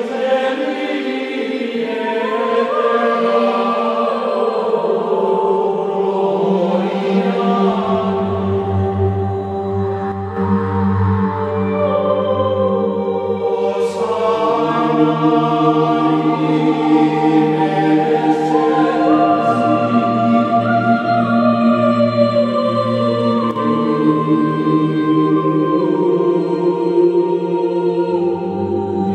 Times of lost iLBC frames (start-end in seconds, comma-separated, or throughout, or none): none